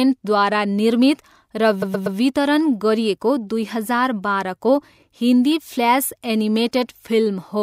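A speech recording with a stutter from 1.81 to 2.17 s: repeated frames, where the same 120 ms block plays three extra times, adding 360 ms.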